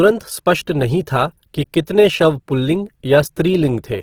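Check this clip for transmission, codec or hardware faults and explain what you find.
One codec fault runs through the whole clip: Opus compression is the likely cause. The speech sounds plainly grainy and rough rather than swirly, because the music-mode encoder keeps each band's energy but fills starved bands with folded or noise content. The bandwidth stays full, reaching about 20.4 kHz, and the level of damage fits a low bitrate near 16 kbps.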